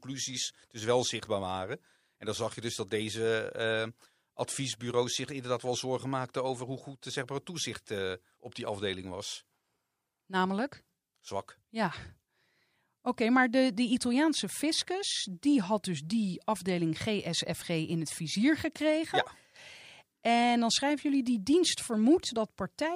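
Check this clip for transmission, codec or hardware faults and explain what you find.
Nothing in this speech recording points to a fault anywhere along its path. There is nothing to report or explain.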